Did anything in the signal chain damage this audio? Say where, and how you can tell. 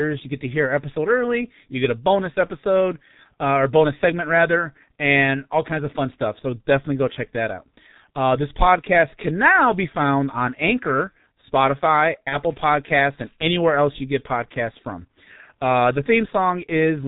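Yes. At the codec stage, the whole clip carries heavy G.723.1 codec damage, which points to roughly 6 kbit/s. The speech is muffled and hoarse, with smeared consonants. A spectrogram shows an empty band above 4 kHz and blocky, slowly changing formants in 30 ms steps.

On the network side, VoIP packet loss concealed by the speech codec appears from 12.29 to 12.37 s, which fits a single lost 30 ms frame. The decoder repeated its last pitch and filter with falling gain, so the sound is briefly stretched into a buzzy tone or coloured noise that fades. The spectrogram shows frozen, smeared harmonics, and the waveform envelope sags and recovers slowly.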